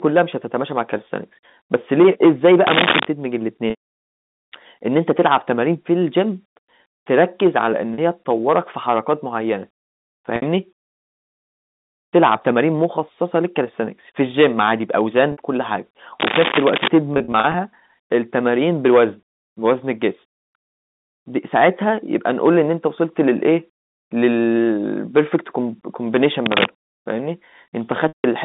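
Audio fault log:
Throughout: hard clipping. The speech is driven about 19 dB past what a stage in the chain can pass, so every peak is sliced flat. Only a small share of samples, around one or two percent, hit the ceiling, but each flat top adds a burst of harmonics, heard as crackle and harsh fuzz on loud syllables. The waveform shows squared-off, flat-topped peaks. A spectrogram shows faint vertical smears of energy at each overloaded peak, reaching to the top of the band.
2.67–3.08 s, 16.20–16.88 s, 26.46–26.65 s: cable scratch noise. Dense, ragged bursts of noise sit over the speech for these stretches, a little louder than the speech itself, and sound like scratching or rustling. This is likely a worn cable or connector being moved, its contact resistance jumping rapidly. The waveform shows jagged, irregular spikes riding on the signal. A spectrogram shows broadband, speckled noise filling the full band for the duration.
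3.70–3.79 s, 7.94–7.98 s, 10.36–10.42 s, 15.32–15.38 s, 17.14–17.54 s, 28.08–28.24 s: packet loss with pitch repetition. Audio went missing and the gaps were bridged by repeating the last pitch period, then fading it. The short 40 and 60 ms losses sound like a briefly held, buzzy tone. At 3.70 s, 300 ms went missing across 360 ms, with one 180 ms run that fades to silence before the sound returns. At 17.14 s, 160 ms are lost in short runs over 400 ms, heard as brief buzzy held notes. The lost lengths fit 20 ms packets. A spectrogram shows flat, frozen harmonic stripes. The waveform shows identical repeated cycles shrinking in amplitude.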